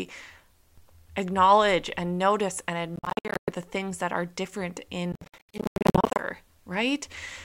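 From 2.96 to 3.51 s, after "acknowledge and notice and", the speech breaks into a Bluetooth dropout: about 350 ms of silence scattered across half a second in abrupt gaps up to 107 ms long, likely from packets arriving too late at the headphones. Speech resumes at "the things that are" as though it had kept playing. A second burst from 5.12 to 6.22 s, after "things that are different", loses about 655 ms over roughly a second, with gaps up to 91 ms.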